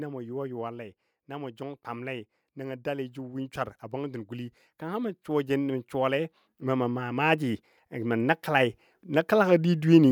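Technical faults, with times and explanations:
1.25–10.07 s, automatic gain rising: from 1.25 s to 10.07 s the whole speech clip swells steadily louder, voice and room background together, by about 17 dB in all. An automatic gain control judged the input too quiet and kept raising its gain a little at a time, so there is no sudden jump. Because the gain applies to everything the microphone picks up, the noise floor climbs in step with the voice instead of the voice alone getting stronger.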